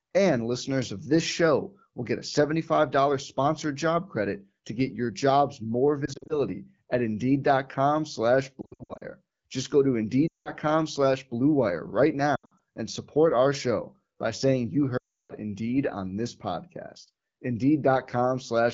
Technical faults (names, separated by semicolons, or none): lost AMR speech frames